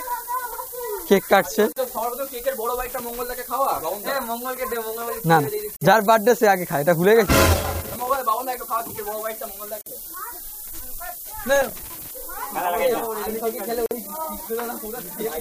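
A steady, thin hiss runs through the whole clip. It climbs sharply toward the top of the band and sits only about 10 dB below the sound. This is low bit depth with noise shaping. The level fits a signal carried on roughly 6 bits, with the rounding error pushed upward in frequency. At 1.72 s a short silence of about 40 ms opens in the continuous sound, which then resumes where it left off. This is a gap at a join of encoded pieces. Separately encoded segments were spliced without trimming the encoder's start delay and final-frame padding. From 2.86 to 3.19 s an irregular burst of scratchy crackle appears. This is loose connector crackle, a worn or dirty contact making and breaking so the signal is chopped. A 49 ms gap comes at 5.76 s. Crackle comes again from 7.26 to 8.17 s. Another gap falls at 9.81 s, more crackle from 11.56 to 12.11 s, and a last gap at 13.86 s. The joins recur every 4 s, matching the length of each encoded piece.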